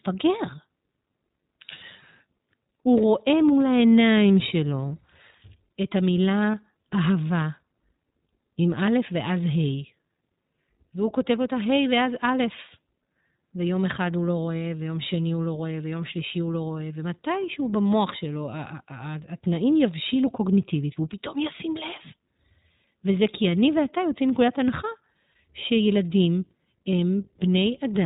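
From the start the speech carries plainly audible iLBC codec damage. Nothing above 4 kHz survives, and the voice has a slightly rough, synthetic edge, consistent with iLBC coding each 20 ms frame independently at a rate that fits 15.2 kbps.

At 6.52 to 6.55 s, lost iLBC frames leave a brief gap that the decoder fills by repeating the last pitch cycle mixed with noise, heard as a short, faintly buzzy held vowel. The loss fits a single 20 ms frame, and normal speech returns almost immediately.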